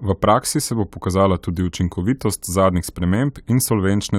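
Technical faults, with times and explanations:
No technical faults can be heard anywhere in this speech recording. There is nothing here that needs a time or an explanation.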